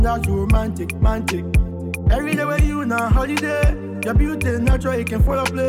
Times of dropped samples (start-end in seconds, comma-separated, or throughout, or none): none